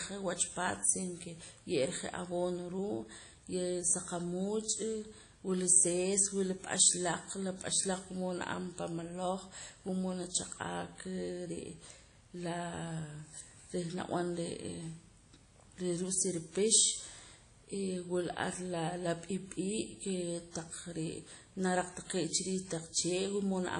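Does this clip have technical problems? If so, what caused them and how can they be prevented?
Yes. Throughout, the speech sounds ringing and washy with breathing hiss, likely from WMA compression: long transform blocks smear quantisation noise, which fits an early encoder near 32 kbps. To prevent it, encode at a higher bitrate or with a modern codec.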